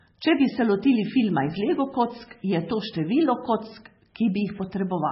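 From the start, the speech has nothing above 5.6 kHz. It sounds dull, watery and swirly, with smeared attacks and chirpy s sounds. The likely cause is heavy MP3 compression. Starved of bits, the encoder drops the treble and switches weak frequency lines on and off between frames. The damage fits a bitrate near 16 kbps.

From 0.26 s to 5.05 s, sharp word clock ticks of uneven strength recur about every 0.2 s, around twenty in all. The receiving device runs on its own clock, unlocked to the sender's, drifting by about 100 ppm. At each slip, one sample is dropped or repeated.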